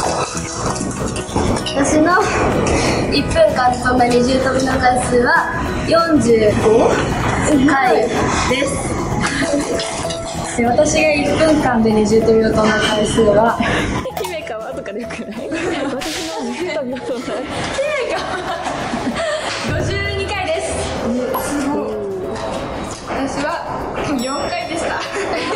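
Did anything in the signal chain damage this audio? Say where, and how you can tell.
Yes. At 14.0 s the level drops by about 8 dB in one step and stays down to the end. The background noise falls with it. That is a sudden gain jump, likely a digital gain change applied without a ramp.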